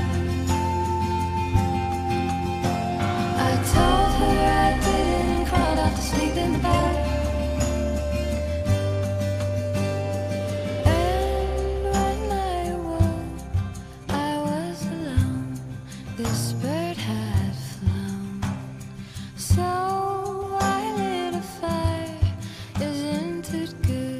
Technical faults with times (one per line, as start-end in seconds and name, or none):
5.15-6.99 time-stretched section